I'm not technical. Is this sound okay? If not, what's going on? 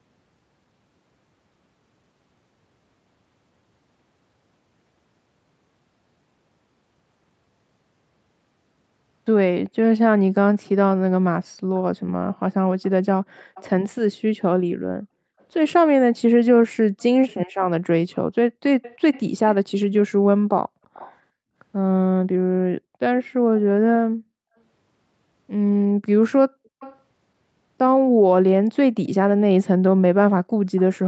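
No. Several times a faint, delayed repeat of the speech trails about a third of a second behind the original, like a ghostly second voice: 12.33–13.65, 15.4–15.44, 16.99–17.34, 18.82–19.98, 20.94–21.16, 26.8–26.97 and 30.76–30.81 seconds. It is clearest near 18.8 and 26.8 seconds and barely there at 15.4. This is an echo leak, likely from a loudspeaker on the other end whose echo canceller let some of the sound slip back into the call.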